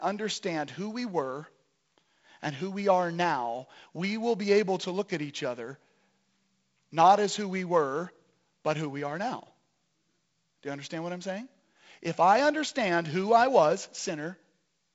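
Nothing stood out on listening to this speech over G.722 wideband telephone coding, with the band ending around 7.7 kHz as that path does.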